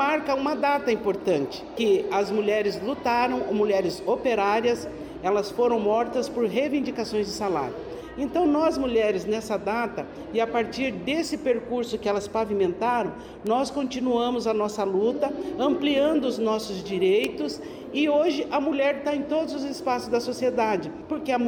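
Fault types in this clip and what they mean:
Bit error spike: single sharp ticks at 0.48, 13.47, 17.25 and 18.28 s, each one to three samples long. A flipped bit makes the value jump by a power of two and snap back, giving broadband clicks peaking from about -31 to about -7 dBFS.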